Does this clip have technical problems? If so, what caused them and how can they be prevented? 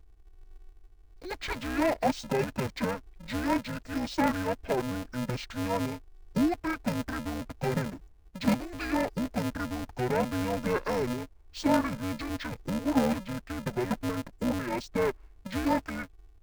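Yes. Interleaved audio read as planar throughout: each 2.67 ms block, which fits 128-sample blocks, is split into false left and right halves, making the speech dull and robotic with a 375 Hz buzz. Prevent it by declaring the buffer layout explicitly and deinterleaving before planar processing.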